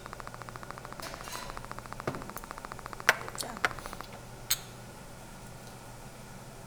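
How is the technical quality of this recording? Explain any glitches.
The recording has one clear technical fault, a train of clicks over the first few seconds. From 0.06 to 4.02 s, around fifty near-identical pulses arrive at a regular 13.9 per second, well above the sound, giving a steady ticking. It is likely interference or a faulty connection or power supply. A waveform shows evenly spaced sharp spikes, and a spectrogram shows thin vertical broadband lines.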